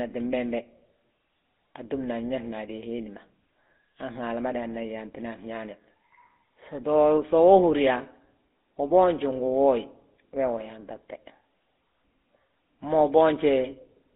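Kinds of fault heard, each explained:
GSM full-rate codec: The whole clip has been through the old GSM full-rate codec, which models the throat and mouth as a filter and drives it with a sparse train of regular pulses rather than the real excitation. Its damage is plainly audible as a buzzy, gravelly roughness across the speech, and the sound fits the 13 kbit/s rate. The band is squeezed to roughly 250 Hz to 3.6 kHz, so the lows are thin and there is no air on top.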